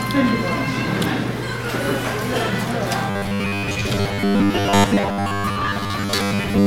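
From 3.1 s to 6.66 s, new audio likely reaches the playback software too seldom, so it keeps replaying a short buffer of about 10 ms, for roughly two thirds of the time. This robotic sound from repeated short buffers imposes a rigid 100 Hz metallic buzz.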